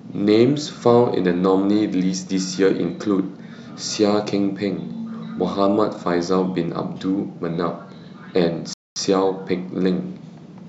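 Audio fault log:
8.73–8.99 s, Bluetooth stall: the speech cuts to clean silence for 226 ms before picking up again, likely because interference held up packets until the headphones' buffer emptied. Unlike packet-loss concealment, the gap is true silence rather than smeared or repeated sound.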